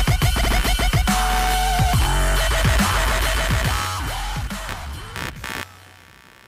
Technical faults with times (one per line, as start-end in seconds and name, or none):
0.00-6.47 computer activity noise